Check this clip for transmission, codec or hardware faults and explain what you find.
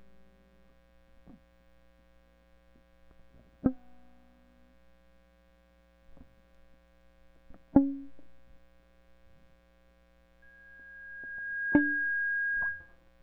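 One hardware fault stands out: loudspeaker feedback squeal near the end of the music. From 10.42 s to 12.98 s a single tone at 1.6 kHz appears. It swells over about one and a half seconds. It then sits roughly 10 dB above the music. A microphone is hearing the loudspeaker it drives. At 1.6 kHz the loop gain passes one. That tone keeps feeding itself and grows into a steady, piercing whistle.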